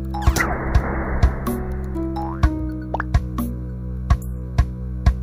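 Nothing stood out as a technical fault on listening to this audio.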